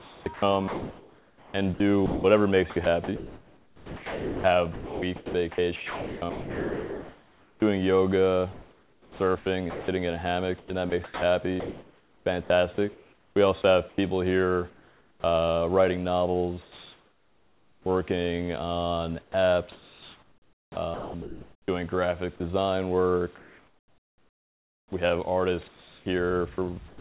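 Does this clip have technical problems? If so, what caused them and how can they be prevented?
Yes. The audio shows two kinds of fault.

Sound chopped by the voice detector occurs from 0.0 to 7.62 s, 8.52 to 15.24 s, 19.22 to 22.4 s and 23.38 to 27.0 s. Within these stretches quieter passages and edges drop out and are replaced by synthetic noise, about 5.1 s, 3.1 s, 1.9 s and 2.1 s of it respectively. The likely cause is the sender's voice activity detector toggling transmission on and off, with the receiver filling the gaps with comfort noise. Prevention: disable discontinuous transmission or lower the detector's threshold and lengthen its hangover time.

Comfort noise in place of the background runs from 16.62 to 17.86 s. For that 1.24 s the real background, which sits about 33 dB below the loudest parts, is replaced by a steady, featureless noise about 5 dB quieter. This is likely discontinuous transmission: the sender stopped sending during the pause, and the receiver generated noise from an occasional spectral update. 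The band limit, with nothing above 4 kHz, fits a narrowband G.711 call path and is not part of this fault. Prevention: turn off DTX on the sending side.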